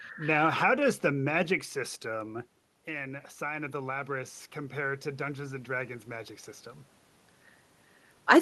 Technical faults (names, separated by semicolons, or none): automatic gain rising